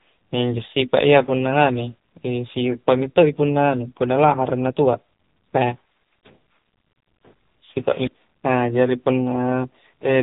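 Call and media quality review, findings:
AMR narrowband mobile codec, throughout: buzzy, synthetic speech, heavy damage fitting a low 6.7 kbps mode; spectrogram shows a hard ceiling at 3.8 kHz, blank above.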